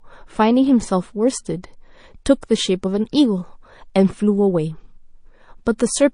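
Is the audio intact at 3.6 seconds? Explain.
No. At 3.6 seconds the speech carries plainly audible damage that runs through the whole clip, likely from MP3 compression. Treble is missing, and weak detail flickers in and out, giving a watery, swirly sound. That fits a low bitrate near 40 kbps.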